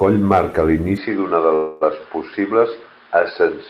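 From 0.97 s to the end, the speech turns dull and boxy with no gap at the change and no obvious jump in level. Nothing is left above 5.2 kHz, and a faint new background noise sits well below the speech. That sudden narrowing points to an input switched to a poorer device, likely a different microphone or a headset's call profile taking over mid-recording. Within that stretch, from 1.55 s to 1.83 s, the sound hangs: the last fragment is drawn out as a fading buzz or hiss for about 258 ms rather than dropping to silence. The speech then picks up exactly where it stopped, with nothing lost, only delayed by that quarter second. This is a call audio freeze, where packets likely held up in transit let the jitter buffer run dry, so the receiver filled the wait by extending what it already had.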